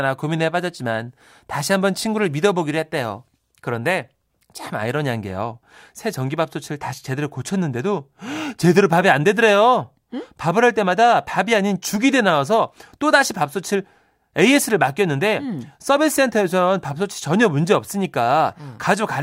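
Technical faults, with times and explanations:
No technical faults are audible anywhere in this speech.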